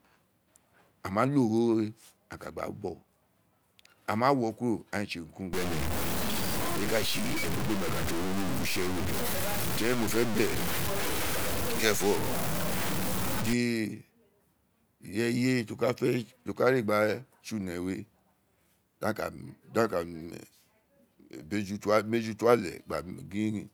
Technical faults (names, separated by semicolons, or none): low bit depth without dither